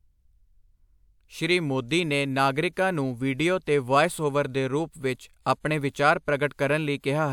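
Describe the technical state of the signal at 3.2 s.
At 3.2 s the audio is intact, with no audible fault at that moment.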